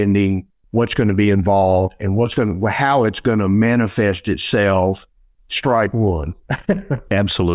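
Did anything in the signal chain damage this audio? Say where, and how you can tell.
No, nothing in the signal chain damaged this audio.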